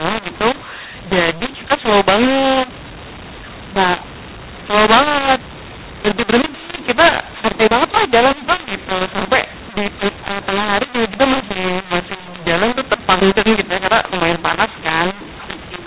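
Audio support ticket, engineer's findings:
Mu-law and A-law mixed up, whole clip: harsh, gritty speech, hiss filling pauses. Mu-law telephone audio decoded as A-law, so levels get scrambled and near-silent samples jump up into audible noise.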